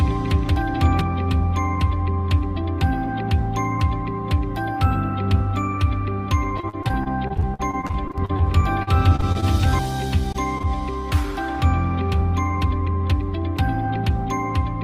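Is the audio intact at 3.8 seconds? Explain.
Yes, at 3.8 seconds the audio plays through cleanly, with no dropout, click, distortion or other fault to be heard there.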